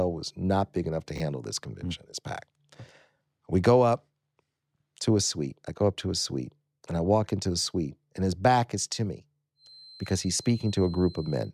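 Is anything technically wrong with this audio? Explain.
Yes, there are two faults.

From 1.16 to 1.2 s, just after "not big enough to", the chunks are out of order. One 20 ms piece of audio was written one chunk late, so it plays after the piece that should follow it. Nothing is missing, but the swapped pieces create three hard joins, heard as a brief jumbled smear. A dropout would leave a gap, and a repeat would sound stuttered. Here the sound is reshuffled instead.

From 9.54 s to the end, after "back is to me", a feedback whistle appears: a thin, steady tone at 4.1 kHz, roughly 25 dB below the speech, swelling and fading slowly in level. The likely cause is a loudspeaker-to-microphone loop held right at the edge of feedback, so one frequency keeps ringing without building up. Unlike runaway howl, it never grows. Unlike electrical hum or whine, it sits at a single high pitch with that unsteady level.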